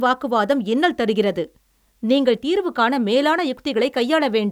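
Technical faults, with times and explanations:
No technical faults are audible anywhere in this speech recording.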